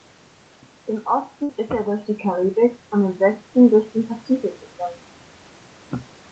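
Speech over a call, with a burst of packet loss from 1.43 to 1.51 s. The receiver continues the last sound and fades it for about 55 ms, then jumps ahead, leaving 60 ms missing. The shifted timing sets it apart from a plain level dip.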